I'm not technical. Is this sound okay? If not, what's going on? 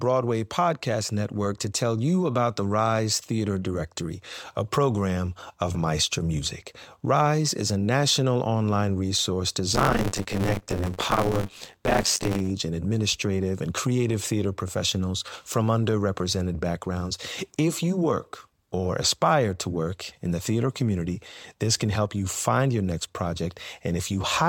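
No. Buffer tearing runs from 9.74 to 12.51 s, after "a national online resource" and before "and administrative and creative". The software and sound hardware slipped out of step, so about 40% of each small chunk is earlier audio, giving a robotic buzz about 94 times a second.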